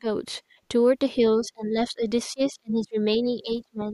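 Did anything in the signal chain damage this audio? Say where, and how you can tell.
Yes. The damage happens in call processing, in the echo canceller.

Speech suppressed in double talk: the speech dips at 0.0 to 0.06 s and 1.4 to 2.07 s by around 15 dB, then more deeply, by around 30 dB, at 2.28 to 2.97 s and from 3.18 s to the end. On a waveform the envelope shrinks. The likely cause is the canceller mistaking simultaneous far-end and near-end talk for echo and attenuating both.

Background gated by the echo canceller: between 0.42 and 0.62 s the room tone drops by about 16 dB for roughly a fifth of a second, then returns. A spectrogram shows the noise floor falling as a clean vertical band across all frequencies, with flat edges rather than a natural decay. This happens because the canceller clamps the microphone gain while the loudspeaker is active, then releases it once playback stops.

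Other side's voice leaking through: at 1.44 to 1.48 s a brief scrap of a second voice appears, around 30 dB below the main speech. On a spectrogram it shows as a faint, short smudge of harmonics that don't line up with the main talker's pitch. The likely cause is incomplete echo removal: loudspeaker output reached the microphone and a residue survived the canceller's subtraction.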